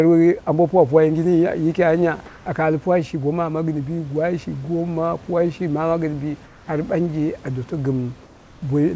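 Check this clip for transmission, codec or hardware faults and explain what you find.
Three short pauses in this speech clip have their room background replaced by a flat, featureless hiss: at 2.26 to 2.46 s, just before "aka al puwa shi"; at 6.46 to 6.68 s, after "shi ma gɨn bi"; and at 8.24 to 8.62 s, after "a doto". The first matches the surrounding level, and the other two drop about 3 dB and about 2 dB. This is comfort noise in place of the background, likely from discontinuous transmission: the sender went silent in the pauses, and the receiver filled them with synthetic noise shaped like the background rather than the real room sound. The call path used G.722 coding, with nothing above 8 kHz.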